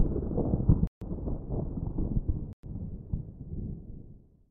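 At 0.87 s and again at 2.53 s the audio drops to dead silence for 141 ms and 104 ms, leaving flat gaps across the waveform and spectrogram, likely Bluetooth stalls from a starved receiver buffer.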